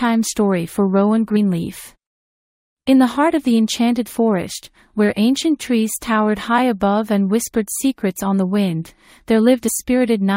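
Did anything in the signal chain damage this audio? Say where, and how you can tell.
Yes, at the codec stage. At 9.67 s there's a quick smeared blip where the audio jumps ahead by roughly 40 ms. That fits compressed frames skipped, about two frames of roughly 21.3 ms each that were missing or rejected as damaged by the decoder. Because adjacent frames overlap, the skip comes out as a soft smudge instead of a sharp click, and the distance jumped matches whole frames.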